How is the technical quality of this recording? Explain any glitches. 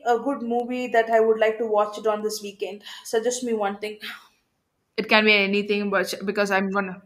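The recording has one clear fault: word clock ticks. From about 0.60 s, just after "a good", until about 7.00 s, sharp ticks of uneven strength recur roughly every half second, around fifteen in all. The receiving device runs on its own clock, drifting by something like 40 ppm. At each slip a sample is dropped or repeated. On a spectrogram each tick is a thin vertical broadband line; the waveform shows a tiny step.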